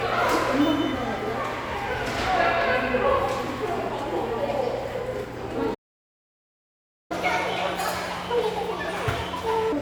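At 5.74 s the audio just drops out for about 1.36 s, a playback stall, likely the player starving for data, before picking up again at 7.12 s. From 7.12 to 9.72 s there's catch-up at higher speed: the backlog runs 1.5 times fast, pitch up around seven semitones, then it settles back.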